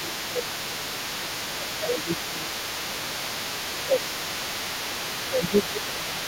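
A speech recording where the talker keeps getting ducked: there's speech suppressed in double talk at 0.0–1.31 s, 1.5–2.51 s, 2.88–3.2 s, 3.72–4.01 s and 5.31–6.25 s, dipping by around 10 dB, likely because the echo canceller couldn't tell the talker from loudspeaker echo and pulled both down. Under all of it, for the whole clip, there's the other side's voice leaking through at roughly 10 dB below the talker, likely residual echo from the talker's own loudspeaker that the canceller never fully removed.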